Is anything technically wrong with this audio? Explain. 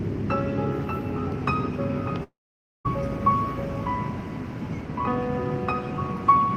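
Yes. From 2.23 to 2.87 s, a likely long network dropout lost about 0.62 s of audio; a fading buzz or hiss gives way to roughly 0.5 s of silence before sound resumes.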